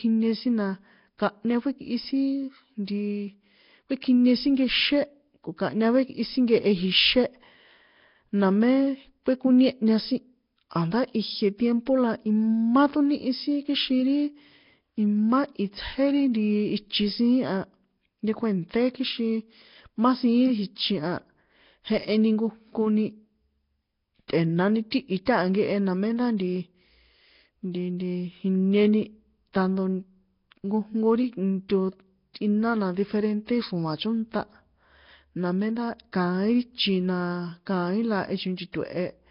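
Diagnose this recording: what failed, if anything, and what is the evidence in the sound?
The codec stage failed, most likely through Nellymoser compression. Throughout the speech there is a rough, hissy halo and a smeared, underwater quality, with nothing above 5.3 kHz. The damage is heavy, consistent with a low rate of around 22 kbps. Weak bands receive no bits and are filled with synthetic noise, which is why the hiss follows the speech. A plain low-pass filter or band-limited line would leave the remaining band clean.

Pre-echo comes from the same codec stage. Short bursts of hiss come just before sharp attacks at 24.28, 24.91, 25.25, 31.69 and 38.72 s, each smeared across 10 to 18 ms. The codec spreads its quantisation noise evenly across a block. When a loud onset falls late in that block, noise sized for the loud part also fills the quiet gap before it, so the attack sounds soft. 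A real echo or reverb would trail after the attack instead.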